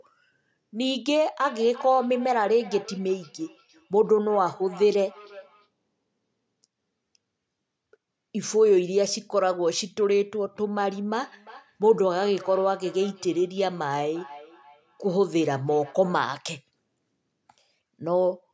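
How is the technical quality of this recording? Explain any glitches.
The recording has two stretches of feedback echo between two devices. The first runs from 1.4 to 5.69 s, the second from 10.74 to 16.2 s. Two devices in one room share a call. One plays back the other's sound, and that microphone hears it again. Neither echo canceller removes sound from the other device. Each phrase returns roughly every 0.4 s, thinner and ringier each time, at about 20 to 21 dB below the speech.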